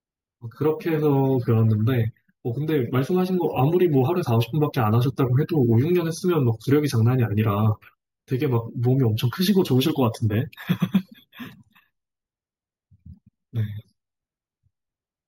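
Speech that was brought up to a higher rate by simply repeating each sample, with no smoothing filter, shows imaging from sample-and-hold upsampling throughout. The steps fit a 16 kHz source raised to 48 kHz, so mirrored copies of the speech spectrum fill the band from 8 kHz to 16 kHz at about 26 dB below the signal. They come across as a bright, metallic fizz that rises and falls with the speech, and its lowest component moves opposite to the pitch.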